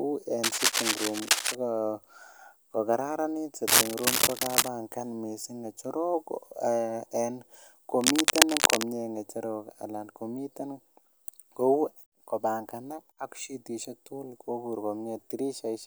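Scratchy, rustling bursts cut across the speech from 0.43 to 1.55 s, 3.68 to 4.68 s (just before "missing ngecherok") and 8.01 to 8.84 s (before "ngecherok anan komiten"), a little louder than the speech itself. This cable scratch noise likely comes from a worn cable or connector being moved.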